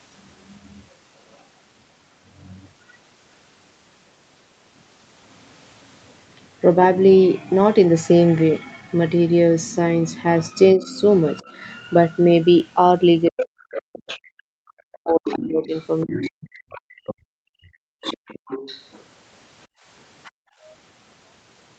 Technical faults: other side's voice leaking through; speech suppressed in double talk; background gated by the echo canceller

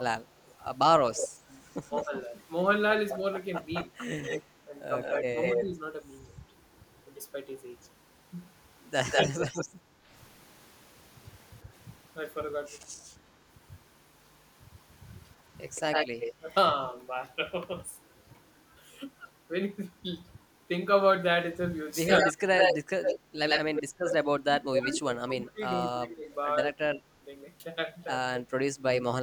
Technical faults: speech suppressed in double talk; echo leak; background gated by the echo canceller

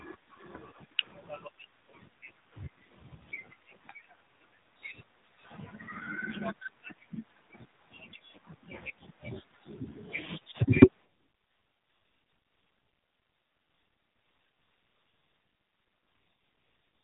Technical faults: AMR narrowband mobile codec

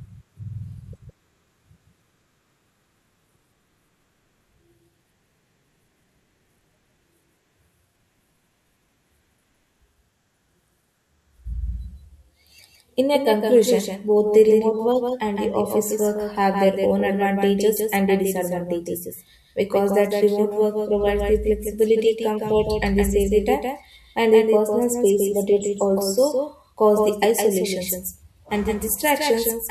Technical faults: doubled audio track

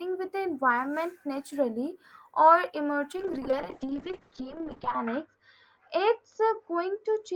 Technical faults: call bitrate drop

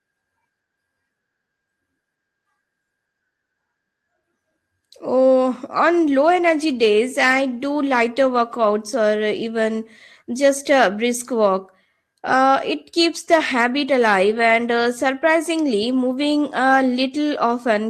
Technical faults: none

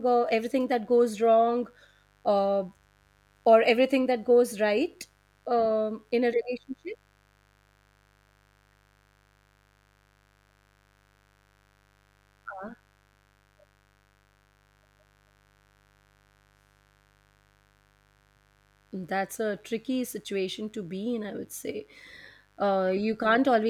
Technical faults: mains buzz

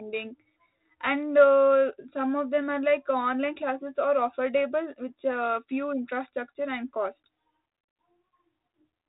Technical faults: none

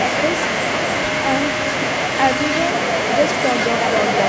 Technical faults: none

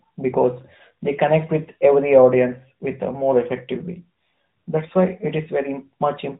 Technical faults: AMR narrowband mobile codec

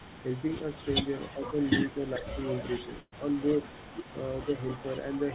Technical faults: echo leak; speech suppressed in double talk; burst of packet loss

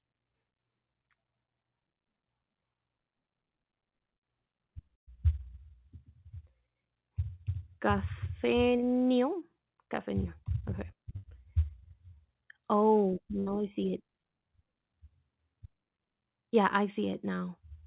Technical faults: short concealed packet loss; burst of packet loss

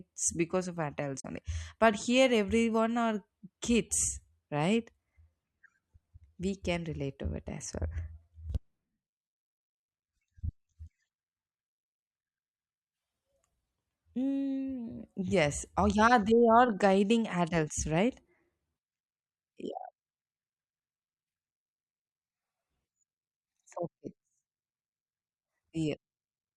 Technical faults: damaged data in a compressed stream

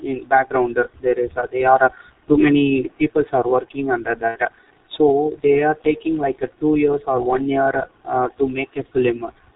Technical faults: channel delay (comb filtering); G.723.1 codec; VoIP packet loss concealed by the speech codec

